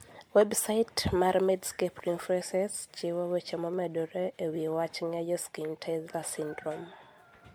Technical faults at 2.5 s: generation loss

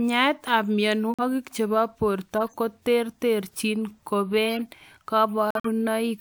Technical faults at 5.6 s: corrupt frame muted

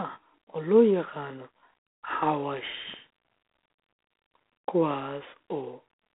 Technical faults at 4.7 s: G.726 ADPCM

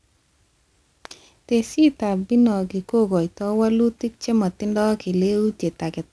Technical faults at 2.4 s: aliasing

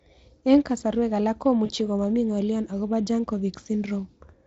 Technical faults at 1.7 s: VoIP packet loss concealed by the speech codec

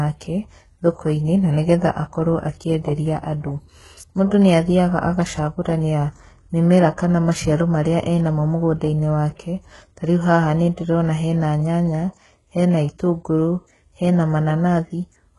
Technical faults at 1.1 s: HE-AAC compression

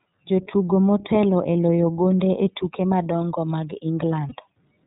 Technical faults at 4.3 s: iLBC codec; lost iLBC frames

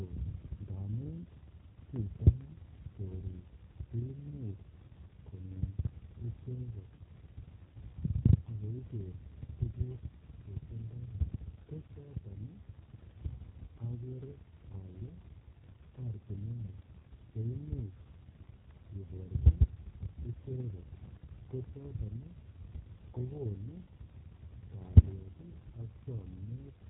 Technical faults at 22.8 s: G.729 codec

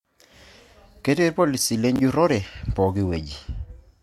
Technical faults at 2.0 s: chunks out of order

